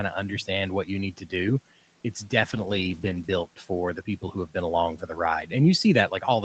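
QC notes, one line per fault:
1.13–1.33 s and 4.05–4.55 s, speech cut by the noise suppressor: just after "understand what you need" and again just after "for the", the suppressor mistakes parts of the speech for background and pulls them down with it, by about 12 dB in the first stretch and about 11 dB in the second. Part of each window is affected, about 0.15 s in the first and roughly a tenth of a second in the second. Those moments sound swallowed and faint.
2.43–3.53 s, call bitrate drop: the call's bandwidth estimate falls and the Opus encoder goes from 32 kbps down to 12 kbps, staying at its lowest for about 1.04 s before recovering just before "for the". With about three-eighths of the bits, the codec describes the speech far more coarsely, so this stretch turns rough and watery compared with the cleaner 32 kbps audio on either side.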